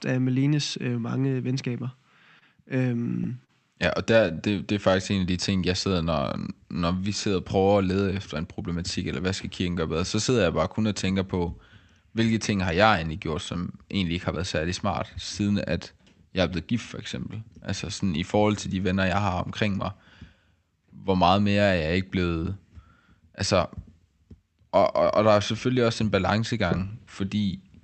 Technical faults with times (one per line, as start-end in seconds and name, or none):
2.39-3.51 repeated stalls (stutter)
4.34-6.14 jitter buffer slow-down
8.35-9.69 jitter buffer speed-up